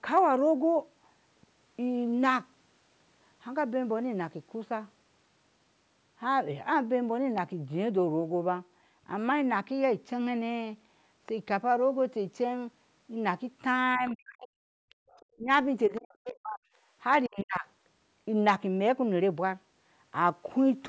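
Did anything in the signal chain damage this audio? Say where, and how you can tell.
Yes, all of it at the call-processing stage, in the stretch between about 14 and 18 s. The speech suppressed in double talk shows up at 13.97–14.57 s, 15.37–16.63 s and 17.27–17.66 s. The talker's level collapses in chunks by something like 40 dB, a bit less in the last one. The likely cause is the echo canceller hearing both sides at once, failing to tell the near talker from the loudspeaker echo, and clamping down on everything.

You can also hear the other side's voice leaking through in the same region: brief scraps at 14.07–14.11 s and 15.96–16.00 s, and a longer one at 14.89–15.25 s. It sits well under the talker, roughly 25 to 35 dB down, so it comes across as a faint second voice. That residue likely means the canceller didn't fully subtract the far end's audio picked up from the loudspeaker.

Then there's background gated by the echo canceller. 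At 14.85–15.09 s the room tone drops out by about 39 dB, and at 16.91–16.96 s it dips only about 7 dB. In both cases it comes straight back afterwards. That's the suppressor slamming the mic down while the loudspeaker plays and then releasing. The call path's band limit, with nothing above 8 kHz, is normal for this stage.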